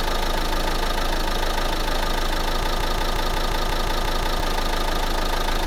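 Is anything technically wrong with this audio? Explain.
Yes. From 2.63 to 4.40 s there is a broken-record loop: the player or stream likely stalled and kept resending its last buffered fragment. A 178 ms slice of sound repeats exactly, back to back, ten times, and the audio belonging to that stretch is lost.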